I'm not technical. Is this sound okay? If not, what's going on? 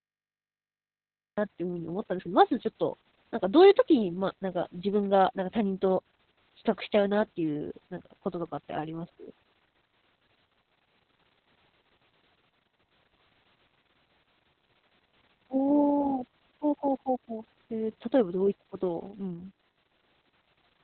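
No. The speech has heavy Opus voice compression throughout: it's been squeezed into a narrow phone-like band with nothing above 4.2 kHz and coded roughly in long chunks, so it sounds muffled, a bit hoarse and slightly robotic.

There's also a cut-off start: the first 1.38 s is dead digital silence, and then the speech jumps straight in mid-sound at 1.38 s with no natural beginning, because the recording evidently started late and missed the start.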